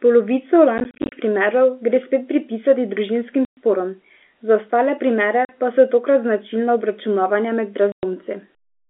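Packet loss filled with silence, with dropped packets (consistent with 10 ms each) replaced by silence, punches hard-edged holes into the telephone-band speech at 0.78–1.12 s before "primerov gre spet pripisati" (scattered gaps up to 30 ms), 3.45–3.57 s before "sporom za", 5.45–5.49 s before "pa so tokrat značilna", and 7.92–8.03 s.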